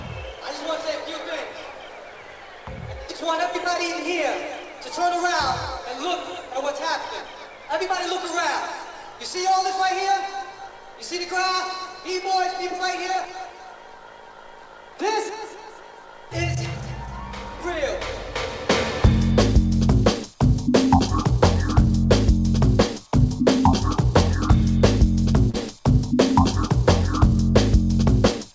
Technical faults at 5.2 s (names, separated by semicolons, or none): none